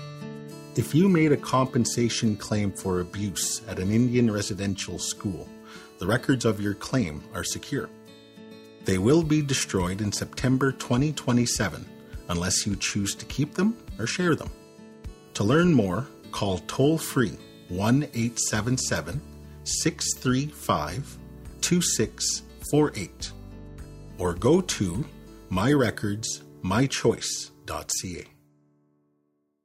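No technical faults can be heard anywhere in the recording.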